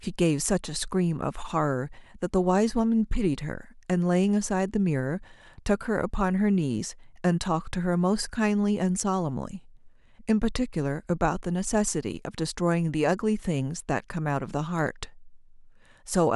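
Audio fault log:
Nothing stood out on listening to this speech recording.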